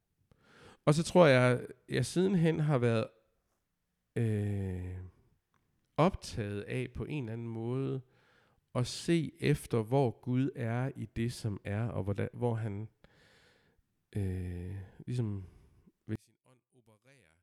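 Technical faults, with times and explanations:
16.16 to 17.42 s, one channel inverted: over the last second or so of the speech, the level on a mono fold-down drops by about 33 dB, and the centred voice and low end all but disappear, leaving a faint remnant. That's likely one side flipping polarity, so anything the two channels share cancels when they're summed, and what you hear is just the small difference between left and right, which for a mostly centred voice is very little.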